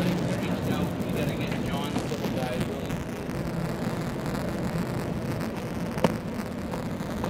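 Buffer tearing runs from start to finish. The application filling the ring buffer and the device draining it have drifted out of step, so their positions cross within every period and a small slice of each buffer replays audio from roughly 20 ms earlier, with hard joins at both edges. The result is a continuous robotic rattle at 172 Hz, which fits a 256-sample buffer, heard only while signal is present.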